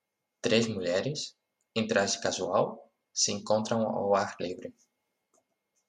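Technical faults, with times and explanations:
The speech signal stays steady and unbroken throughout, with no technical fault to be heard.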